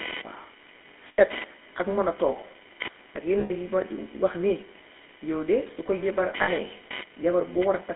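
A speech recording carried over a GSM full-rate codec, with the coded sound confined to roughly 250 Hz to 3.5 kHz and plainly audible codec damage: a buzzy, gravelly roughness from the pulse-driven vocal-tract model, which fits a 13 kbps full-rate stream. Lost GSM frames occur at 1.08 to 1.21 s, just before "ak man a togg", at 3.40 to 3.51 s, and at 6.42 to 6.49 s. Each gap is filled by repeating the last good frame, so the sound hangs as a rough metallic ring. The first two holds last about 100 ms and the third about 60 ms, consistent with runs of five and three missing frames. Throughout, computer activity noise sits about 20 dB below the signal as a buzzing chirp pulsing at roughly 500 Hz. It follows load changes on the computer's shared audio ground rather than the speech itself.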